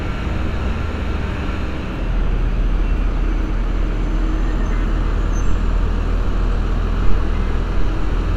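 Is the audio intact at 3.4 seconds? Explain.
Yes, at 3.4 seconds the sound plays through intact, with no dropout, click, distortion or other fault at that moment.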